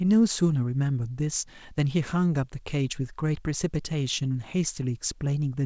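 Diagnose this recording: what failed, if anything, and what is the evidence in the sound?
Nothing failed; no fault can be heard here.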